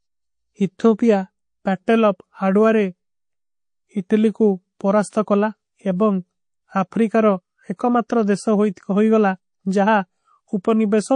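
From the start the speech carries plainly audible MP3 compression, likely from a low bitrate around 40 kbps. Short of bits, the encoder drops weak frequency lines that flicker on and off. The result sounds watery and swirly, with metallic chirps on s sounds.

At 7.76 s comes a pre-echo. A sharp attack falls late in a transform block, about 52 ms long, with no switch to shorter blocks. Its quantisation noise spreads backward. A hiss about 15 dB up fills the 32 ms before the attack, which sounds smeared.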